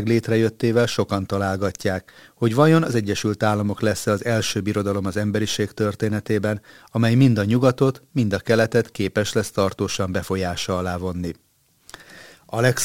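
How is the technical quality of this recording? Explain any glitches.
Nothing in the recording stood out as a technical problem on listening, so there are no glitches to explain.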